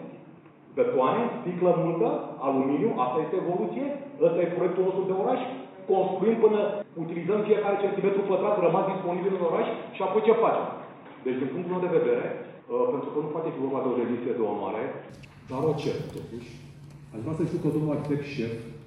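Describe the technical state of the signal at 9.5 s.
At 9.5 s you're inside a stretch running from the start to about 15.1 s where the sound is band-limited, with nothing above 3.8 kHz and a faint new noise floor well below the signal, so it comes across dull and boxy. That's likely an input switched to a poorer device.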